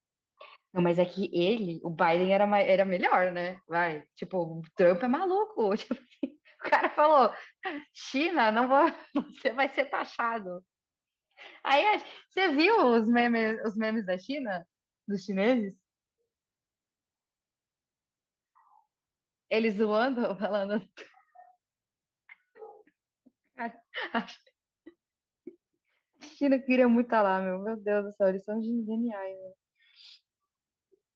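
No faults: the speech runs through Opus voice compression in its hybrid fullband mode, which fits a rate of about 20 kbps, leaving only light coding texture.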